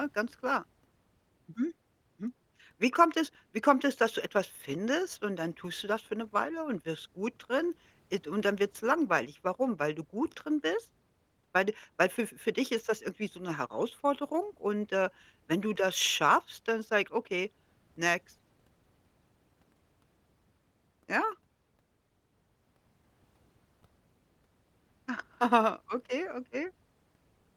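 Nothing goes wrong anywhere in this speech, and the Opus voice compression carrying it sits in the background without drawing attention to itself.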